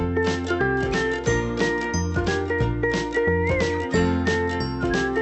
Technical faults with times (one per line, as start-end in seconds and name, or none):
none